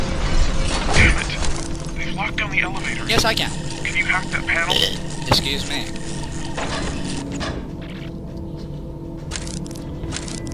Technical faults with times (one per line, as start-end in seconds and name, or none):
none